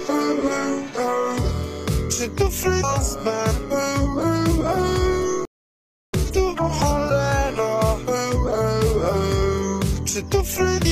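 At 2.79 to 2.84 s and again at 6.31 to 6.35 s, damaged data in the compressed stream makes the decoder lose frame sync, producing a brief glitch while it searches for the next frame header. From 5.45 to 6.14 s, a playback stall cuts the sound to silence for about 0.68 s before it resumes, likely because the player ran out of buffered data.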